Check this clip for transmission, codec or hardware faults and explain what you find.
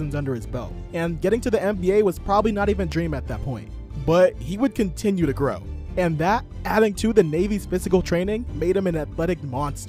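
One hardware-type fault is present: a single loud pop.

Loud pop, 2.92 to 2.94 s. A brief surge of voltage has been added on top of the signal, most likely from a plug being moved, a switch, a static discharge or a driver glitch, and the stages after it have shaped it into a short pulse. It is heard as one sharp pop, peaking about 10 dB above the surrounding audio, while the sound carries on underneath without a break.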